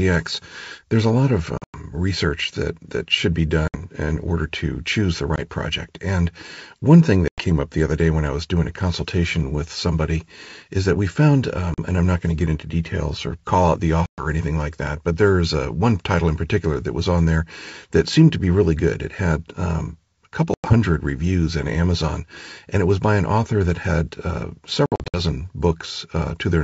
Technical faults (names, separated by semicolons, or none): packet loss on an ADPCM call